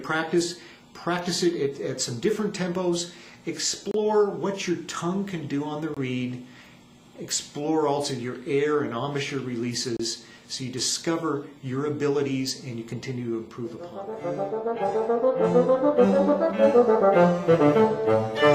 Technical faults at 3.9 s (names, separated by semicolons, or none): gap between stream segments